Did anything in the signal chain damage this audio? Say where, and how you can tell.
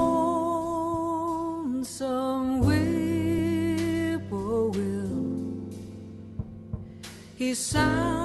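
Yes. A skip ahead at 3.38 s comes from the network and jitter buffer stage. Playback jumps forward with no gap filled, and roughly a fifth of a second of audio simply never plays. The two sides of the jump butt together almost directly, so the sound lurches forward abruptly. That fits a stretch that was lost in transit or discarded when an overfull buffer let newer, already-queued audio through.

A jitter buffer speed-up runs from 3.94 to 4.28 s, right after that jump, and it also comes from the buffer stage. The audio plays at about 111% speed with its pitch unchanged, so it sounds briefly hurried. The receiver was holding more audio than it wanted and shed the excess by cutting out short pitch-period slices repeatedly, removing a few tens of milliseconds in total. The Opus call codec, band-limited to about 12 kHz, is also in the chain.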